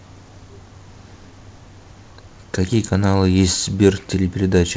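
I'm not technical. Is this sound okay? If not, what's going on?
Yes, nothing stood out when listening to this speech recording; it came through a normal call connection, which leaves out the very highest sounds above 8 kHz, as such calls do.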